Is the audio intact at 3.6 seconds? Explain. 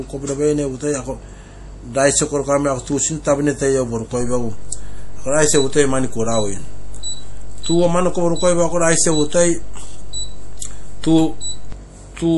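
No, at 3.6 s, like the whole clip, the speech has plainly audible MP3 compression damage, likely from a low bitrate around 48 kbps: weak frequency lines drop out and nothing remains above 11.5 kHz.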